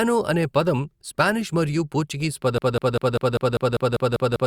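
Right after "పదం స్పానిష్ మరియు పోర్చుగీస్", at about 2.58 s, the speech turns into a broken-record loop. A fragment of about 0.2 s (198 ms) plays back to back, identical each time, ten times over, and it never recovers before the clip ends. Whatever speech should have followed is simply gone. It's most likely a stalled player or stream that kept resending the last chunk in its buffer, giving that stuttering, machine-gun repeat.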